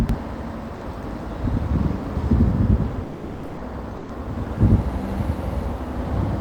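Throughout the recording of everyday sounds, every event is followed by a second copy about 93 ms later at the same level. This is channel delay (doubling), which fits one channel running a 4096-sample buffer late before both are summed to mono. Reverb or a room echo would fade and smear, but here there is a single equal-level slap. At 0.75 to 0.81 s (60 ms), 3.03 to 3.57 s (540 ms) and 3.97 to 4.09 s (120 ms), the sound gives way to steady noise or near silence and then resumes, most likely sound dropped by the voice detector, with comfort noise filling each gap. Packet loss would instead leave clicks or warbly concealment.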